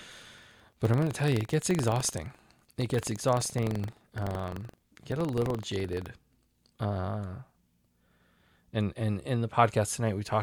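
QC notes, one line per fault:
0 to 6.08 s, buffer tearing: the speech carries a hard, robotic rattle at 23.4 Hz, which fits a 2048-sample buffer. The writing side and the reading side of the ring buffer have slipped and now cross inside each period. A small slice of every buffer plays audio from about a tenth of a second earlier. Hard joins sit on both sides of that slice. The buzz follows the signal and stops after 6.08 s.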